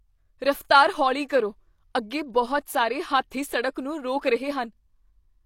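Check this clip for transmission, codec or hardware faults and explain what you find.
One codec fault turns up. At 3.30 s, just after "ਕਰੋ ਅੱਗੇ ਬਹੁਤ ਸਾਰੇ", a brief hiss of about 12 ms runs ahead of a sharp onset, which lands softened and smeared. This is pre-echo: the codec spread quantisation noise, scaled to the loud attack, across its whole block, including the quiet stretch before it.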